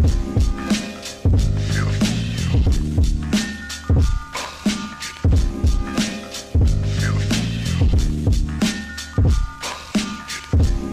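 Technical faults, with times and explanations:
No technical faults can be heard anywhere in this clip.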